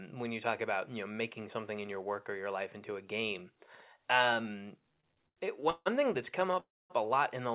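Speech, heard over a narrowband call line with nothing above 4 kHz, which fits G.711 A-law at 64 kbps. From 4.92 to 5.88 s there are repeated stalls, a stutter. The sound halts eight times. About 315 ms is filled in, a third of that span. The longest hold is 156 ms. Packets were arriving late, so the jitter buffer kept running dry. Each time, the last sound was carried on until playback resumed. Nothing is lost, but the speech drags. From 6.51 to 6.55 s comes a short stall from a late packet. One sound is held 22 ms too long, with a slight buzz or dip. The packet missed its slot, so the receiver stretched the previous sound. Then it continued from the same point. From 6.60 to 6.92 s the audio freezes. The last sound turns into a fading buzz or hiss and then about 240 ms of silence, nearly 300 ms of filled time in all. Afterwards the speech picks up where it stopped. This is likely a call audio freeze from packets held up in transit, which emptied the jitter buffer.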